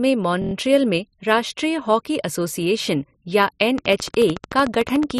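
At 0.42 s there's a system hang loop: a 23.2 ms slice repeats five times until 0.53 s, buzzing at 43.1 Hz, which fits a 1024-sample buffer, with next to nothing lost. From 3.78 s to the end, a train of clicks ticks regularly at 13.6 per second, about 10 dB above the speech, likely from nearby electrical interference.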